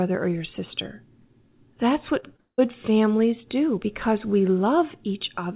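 Speech, carried over a narrowband call link with nothing above 4 kHz. From 2.2 to 2.6 s there is repeated packet loss, heard as robotic sound. Four holes fall close together, the longest about 175 ms. Each is patched by stretching the last bit of audio, so about 60% of that stretch is filler. The result is choppy. It clears just before "families do because we". The band limit fits G.711 mu-law coding.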